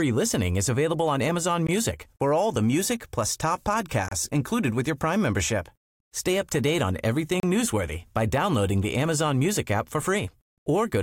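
The speech was encoded in separate pieces and joined without trimming each encoder's start-up delay and end padding, so both survive as gaps at a join of encoded pieces. At 1.67 s a 17.7 ms hole opens just before "for all the music". Another of 31.2 ms falls at 4.08–4.12 s between "the music plus top" and "included with your", and a third of 32.4 ms at 7.40–7.43 s between "up to date on" and "newsworthy by downloading the". Each is an abrupt dropout with smeared edges, after which the sound resumes where it stopped.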